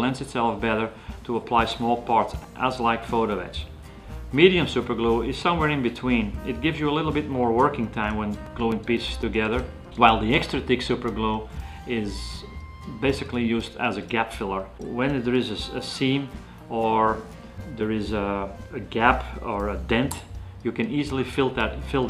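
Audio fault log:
8.21–9.98 s, CD scratch ticks: eight short ticks, the longest only a few milliseconds, spaced at roughly four to five per second. A blemish on the disc corrupted more data than error correction could rebuild, and it returned once per rotation, so the player concealed or muted a small patch each time. The steady, rotation-locked spacing and the short run set it apart from random vinyl crackle or irregular buffer dropouts.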